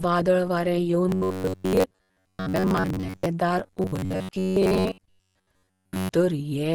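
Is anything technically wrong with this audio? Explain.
Yes. Throughout the speech, the audio is limited to super-wideband bandwidth and has plainly audible codec damage, likely Opus compression in its hybrid speech mode. This fits a low rate around 16 kbps, where reduced band detail leaves voices muffled, hoarse and grainy.

Robotic sound from repeated short buffers occurs from 1.09 to 3.26 s, just after "वादळ वारें", and again from 3.59 to 6.09 s. A likely cause is late audio with the last chunk of roughly 10.7 ms replayed, so most of the real audio is lost. This imposes a rigid metallic buzz at 93.8 Hz.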